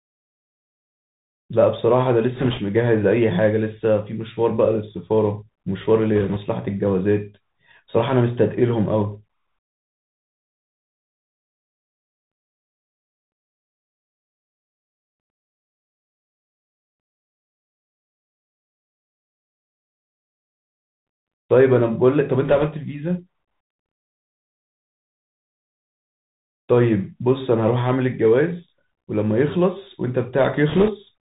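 Throughout, the speech carries the sound of the Bluetooth CVSD headset codec. It is narrowband, with nothing above 4 kHz, and a fine granular hiss sits beneath it, which fits a one-bit delta stream running near 64 kbps. The damage is plain. Loud, bright passages outrun the adaptive step and smear, and s sounds turn scratchy. Unlike a frame-based narrowband codec, CVSD produces a continuous grain with no warbly or metallic swirl.

Four short bursts of bit errors on a Bluetooth voice link follow: 2.35 to 2.60 s, 6.16 to 6.38 s, 22.45 to 22.68 s, and 30.69 to 30.89 s. Flipped bits in the CVSD stream each nudge the waveform only slightly, and their effect fades quickly. The result is a rushing crackle laid over the speech rather than dropouts or sharp clicks. That distinguishes it from packet loss, which would leave gaps or repeats. The error rate is around 2% in the first and third bursts and near 1.5% in the second. 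The last burst, at about 4%, sounds noticeably rougher.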